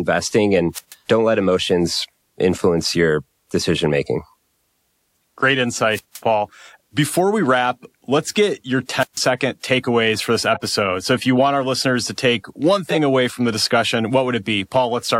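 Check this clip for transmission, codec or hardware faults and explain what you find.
Two kinds of fault are present: three wireless microphone squelch dropouts and two corrupt decoded frames.

The squelch dropouts fall at 0.73 to 0.95 s, 5.91 to 6.21 s and 8.99 to 9.20 s. Each time the FM radio link weakens, hiss swells briefly, then the receiver's squelch shuts the output off for about 133, 165 and 140 ms respectively before the speech returns. On a waveform each appears as a flat, near-empty gap. A spectrogram shows a short broadband haze just before a blank vertical stripe.

The corrupt frames decoded occur at 10.53 to 10.67 s, spanning roughly three frames, and at 12.89 to 12.95 s, a single frame. Damaged bits inside compressed frames were decoded as if valid, so energy lands at wrong frequencies and levels for the length of each frame. The first error peaks at roughly -15 dBFS. The second is louder, peaking around -5 dBFS. 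A spectrogram shows blocky, misplaced patches that do not match the surrounding speech harmonics. The waveform shows abrupt spikes, the second one especially tall.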